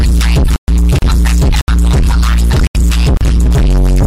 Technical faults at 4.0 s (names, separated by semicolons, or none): none